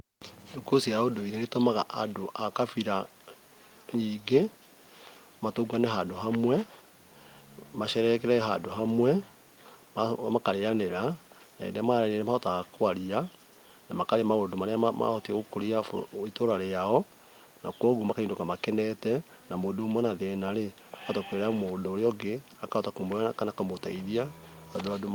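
No technical faults are audible.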